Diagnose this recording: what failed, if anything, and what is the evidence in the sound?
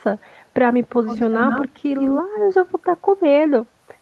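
Call processing leaked echo: a far-end echo canceller likely left loudspeaker pickup in the return path, so the speech returns 111 ms late. It sits about 5 dB down at 1.07 to 1.8 s, about 10 dB down at 1.99 to 2.22 s, and fades to a faint trace at 2.68 to 2.74 s.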